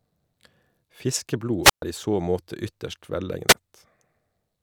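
Two wireless microphone squelch dropouts occur in the speech, at 1.62 to 1.82 s with a 128 ms mute, and at 3.48 to 3.54 s, just after "så måte ytterst", with a 6 ms mute. Each time, the fading FM radio link trips the receiver's squelch, producing a short burst of hiss before near-silence.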